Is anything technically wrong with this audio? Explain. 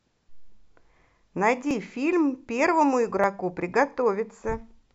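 Yes. At 1.71 s and 3.24 s the speech has a slight jump ahead, losing a couple of milliseconds and then a few. This is likely a dropped buffer (overrun), where unread samples were overwritten and the ends joined. Unlike an underrun, there is no silent gap.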